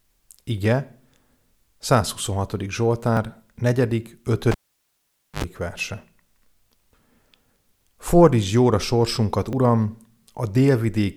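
At 3.17 s the speech jumps forward, and the same thing happens at 4.07 s. The cause is likely a dropped buffer (overrun). Samples were overwritten before they could be read, and the two sides were spliced together with no gap. About 20 ms is lost at the first point and about 30 ms at the second. A waveform shows an abrupt discontinuity with no silence between the sides, and a spectrogram shows a thin vertical broadband line.

From 4.52 s to 5.44 s the cable is pulled and plugged in. A pop opens a stretch of near silence lasting about 0.87 s. A 74 ms burst of 50 Hz mains buzz follows while only the tip makes contact, and a second pop brings the sound back. On a spectrogram this shows as two vertical spikes around a dark gap, with bright horizontal lines at 50 Hz and its harmonics during the buzz.

At 9.53 s, right after "jóra sorsunkat", what is likely another overrun skips about 10 ms. 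It gives a jump in the sound, visible as one more narrow step in the waveform.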